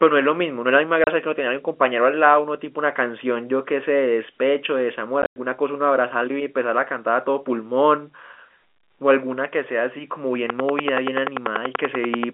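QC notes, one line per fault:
1.04 s and 5.22–5.36 s, packet loss filled with silence: lost packets were replaced by silence, leaving a 30 ms hole, then 120 ms of holes with a longest run of 100 ms, all with hard edges.
10.50–12.24 s, train of clicks: a regular pulse about 10.4 times a second, around twenty clicks standing well above the speech, likely from interference or a faulty connection, ticking throughout.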